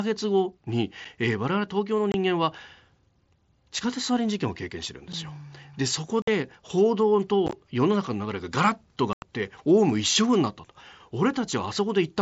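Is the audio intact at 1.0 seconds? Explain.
No, there's a dropout right around there, at 1.05 s. It's unconcealed Bluetooth headset packet loss: one voice packet between headset and phone went missing, about 7.5 ms of speech, which fits a single lost mSBC packet. Nothing patched over it, so the link just put silence or an idle pattern in its place. You hear a tiny hole in the speech with abrupt edges.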